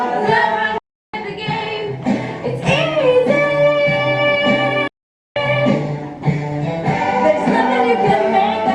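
At 0.78 s the sound cuts almost instantly to silence, with a fade of about 3 ms, and returns at 1.14 s, leaving a hole of about 350 ms. A second, longer gap runs from 4.88 s to 5.36 s, about 480 ms. Both are digital broadcast dropouts: the receiver lost good frames, muted, and resumed later in the programme. Everything transmitted during those gaps is gone.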